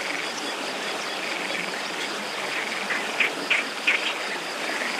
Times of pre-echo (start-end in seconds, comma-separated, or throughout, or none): none